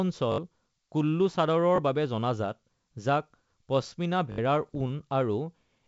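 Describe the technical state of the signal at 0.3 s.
Repeated buffer, 0.32 to 0.38 s: audio arrived late, so a 20 ms chunk replayed three extra times, causing a brief hard-joined stutter that loses roughly 70 ms.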